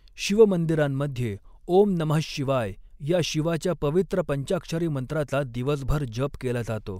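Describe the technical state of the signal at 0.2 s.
At 0.2 s the speech signal is intact, with no audible fault at that moment.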